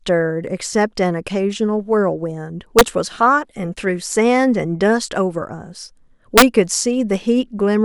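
At 2.79 to 2.81 s, and again at 6.38 to 6.42 s, the speech hits integer overflow. Loud peaks push the sum past the biggest value the integer can hold, by about 3 dB the first time and about 2 dB the second. Rather than being held at the ceiling, the samples wrap right around to the opposite sign. What you hear is a hard, violent crack on each loud bit, far nastier than ordinary clipping.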